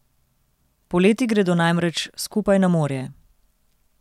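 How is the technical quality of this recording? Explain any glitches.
The technical quality of the recording is good, and there are no glitches to explain.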